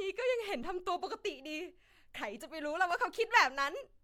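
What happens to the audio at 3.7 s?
Nothing goes wrong at 3.7 s: the speech carries on cleanly through that moment with no dropout, click or distortion.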